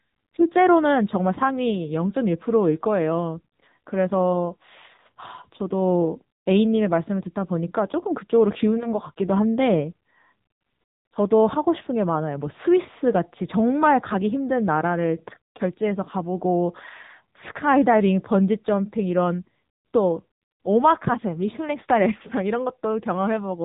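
From start to finish the speech has AMR narrowband mobile codec damage: nothing above 3.8 kHz, plus a buzzy, synthetic edge that fits a low mode around 8 kbps.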